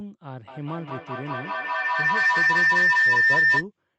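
Speech passes through a call codec whose band stops near 8 kHz, and a feedback howl takes over from 0.48 to 3.66 s. Microphone-to-loudspeaker loop gain exceeds unity, so repeats grow toward a tone around 2 kHz, pulsing roughly every fifth of a second and peaking about 14 dB above speech. A spectrogram shows a bright horizontal line there, and the waveform swells into a pulsing block.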